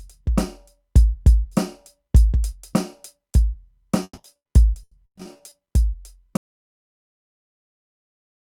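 From 4.03 to 5.53 s, network packets went missing again and again, and each hole was patched by stretching the preceding audio. That is repeated packet loss, and it leaves the music choppy, with about a dozen short gaps, the longest near 140 ms, covering roughly two-fifths of the stretch.

At 6.37 s the input signal was lost, likely through a disconnected device or failed link, while recording carried on writing silence. This audio dropout to silence cuts the music off abruptly into dead silence with no room tone, lasting to the end.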